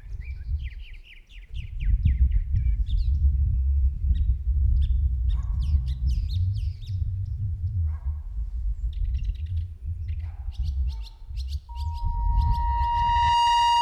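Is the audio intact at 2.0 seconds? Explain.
Yes, the audio is intact at 2.0 seconds, with no fault audible at that moment.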